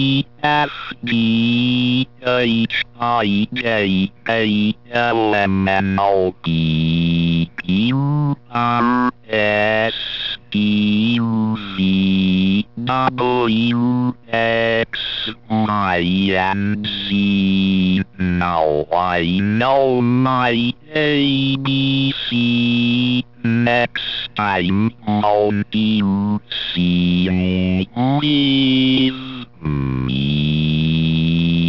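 The audio sounds gritty and metallic from start to finish, with hiss-like and bright content smeared into harsh, unrelated tones and the spectrum running hard up to a wall at 6 kHz. This is aliasing. The sample rate was reduced without first filtering out content above half the new rate, which fits a drop from 48 kHz to 12 kHz. Everything above 6 kHz folded back down as false pitches, sitting roughly 30 dB below the signal.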